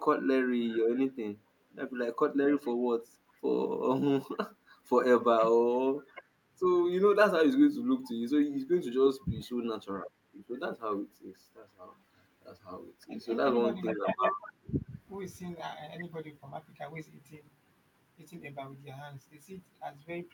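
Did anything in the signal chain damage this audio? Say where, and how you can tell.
Yes, at the call-processing stage. The speech is suppressed in double talk at 1.68–1.76, 5.35–5.64, 9.12–9.32, 10.34–10.39, 13.24–13.30 and 13.92–14.81 s. The level dips sharply, by roughly 20 to 30 dB in the deeper cases and only slightly at 13.24 s. The longest dip lasts most of a second. On a waveform the envelope caves in mid-phrase. A spectrogram shows columns where the harmonics fade out. The likely cause is an echo canceller that mistook overlapping talk for echo and ducked it.

There is also an echo leak at 2.66–2.70 s, again from call processing. A faint delayed copy of the speech returns 441 ms late, around 35 dB below the direct signal. On a spectrogram it appears as a weak, smeared repeat of the earlier harmonic pattern. In the waveform it is a small ripple trailing the original by that fixed gap. 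It is likely residual loudspeaker pickup that the far end's canceller failed to remove and sent back.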